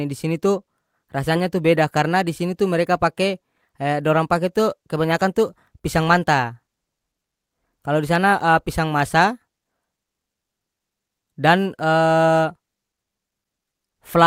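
A speech recording with nothing technically wrong to point to anywhere in it, so there are no times or causes to give.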